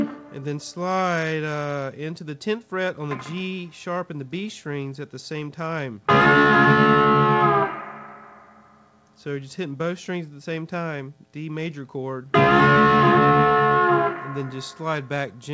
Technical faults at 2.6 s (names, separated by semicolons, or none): none